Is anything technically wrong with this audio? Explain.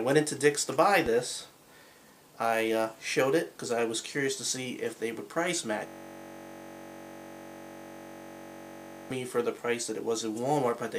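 Yes, there are two faults.

A loud pop appears between 1.06 and 1.09 s as a single sharp thump, peaking about 5 dB above the surrounding sound, which continues beneath it. The likely cause is a brief voltage pulse from a switch, plug, static or driver glitch that entered the signal path and was shaped by the circuitry after it. A waveform shows one tall spike standing out from the envelope. A spectrogram shows a thin vertical stripe spanning the whole frequency range.

A system hang loop runs from 5.87 to 9.10 s. While the system was stalled, the audio hardware kept replaying the same stretch of its buffer. A 21.33 ms fragment repeats exactly, about 150 times, which fits a 1024-sample buffer. The result is a steady, rough buzz at 46.9 Hz instead of the expected sound. On the waveform this appears as a perfectly periodic block of identical cycles. The spectrogram shows evenly spaced horizontal harmonics at multiples of 46.9 Hz, frozen for the whole span.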